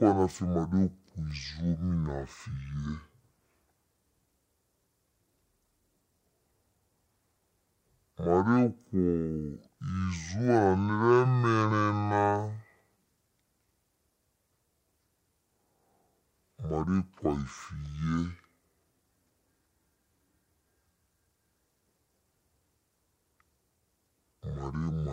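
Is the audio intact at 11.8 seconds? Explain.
No. At 11.8 seconds the speech shows a stereo read as mono fault, which runs through the whole clip. The left and right samples, stored alternately, are taken in sequence as one channel, so every stereo frame becomes two consecutive mono samples. That stretches the timeline to half speed and drops the pitch by 12 semitones, a full octave, making the speech slow and deep. A fainter mirrored copy of the sound also shows up in the upper half of the spectrum.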